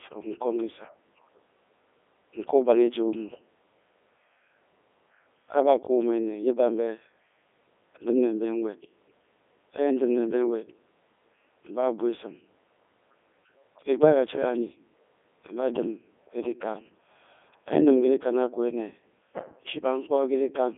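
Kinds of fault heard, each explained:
Codec 2 vocoder: The speech sounds robotic and buzzy throughout, heavily damaged, confined to roughly 250 Hz to 3.5 kHz with nothing above 3.6 kHz. The decoder rebuilds the voice from sine waves using only pitch, voicing, energy and spectral envelope, consistent with Codec 2's top 3.2 kbit/s mode.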